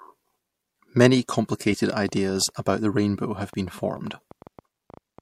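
Pre-echo at 1.28 s: the codec used a long block of about 26 ms and never switched to short blocks. Quantisation noise meant for the attack spread into the quiet moment before it, adding a short hiss about 14 dB up for 10 ms.

A train of clicks runs from 2.09 s to 5.2 s: roughly twenty pulses of similar shape at about 6.5 per second, irregularly spaced, peaking at roughly the level of the speech. They tick through pauses too, likely interference from nearby equipment or a faulty connection or power supply.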